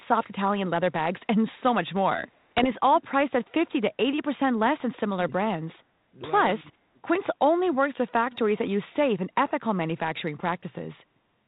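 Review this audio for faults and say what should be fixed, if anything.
Echo leak at 2.35 to 2.4 s and 8.32 to 8.38 s: a copy of the speech returns 275 ms late, faint at first, then roughly 25 dB down. This is likely from a loudspeaker echo canceller letting residue through. On a spectrogram it appears as a dim duplicate of earlier harmonics, shifted right. Prevent it by strengthening the far-end echo canceller and residual echo suppression.

Bit errors on an ADPCM link at 2.6 to 2.69 s produce pops and rough bursts with brief level jumps. Flipped bits derail the decoder's step size and predictor. The waveform shows spikes and broadband vertical smears on the spectrogram. Prevent them with better radio link quality or error concealment on the ADPCM stream.

Speech suppressed in double talk at 6.63 to 6.98 s: for about a fifth of a second the level dips by up to about 20 dB, likely because the echo canceller ducked while both sides spoke. 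The waveform envelope sags. Prevent it by tuning the double-talk detector so near-end speech is not attenuated.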